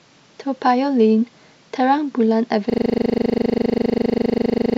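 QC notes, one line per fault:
2.7 s to end: system hang loop. The speech gives way to a rapid, rattling buzz, a 40 ms fragment repeating exactly at 25 times per second, about fifty times, because the system froze while the audio hardware kept replaying its ring buffer.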